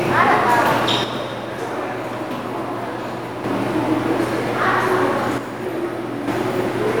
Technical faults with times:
1.04-3.44 one channel drops out
5.38-6.28 one channel drops out

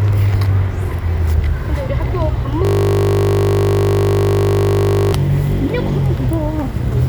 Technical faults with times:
2.65-5.13 system hang loop

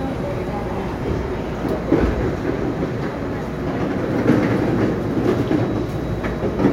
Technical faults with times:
none

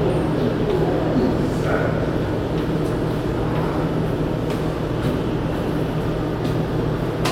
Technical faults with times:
0.00-7.32 mains hum

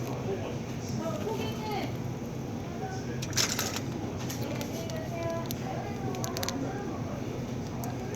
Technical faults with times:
none

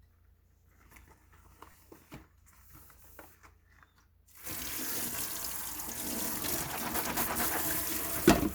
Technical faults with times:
1.72-1.74 lost LE Audio frames
5.16-5.18 lost LE Audio frames

